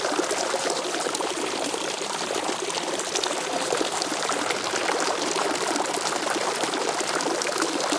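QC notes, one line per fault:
Nothing to flag here; the sounds in this clip came through without any problems I could pick out.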